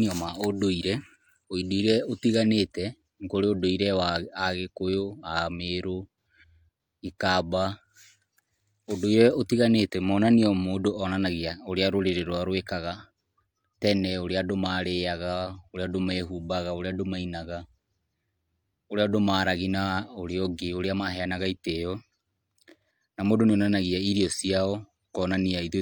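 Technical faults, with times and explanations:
Nothing technical jumps out anywhere in this speech recording, so there's nothing to flag.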